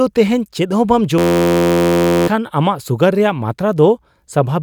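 Speech that collapses into a steady 86 Hz buzz from 1.18 to 2.28 s: a system hang loop replaying one 11.6 ms slice, fitting a 512-sample buffer, losing about a second.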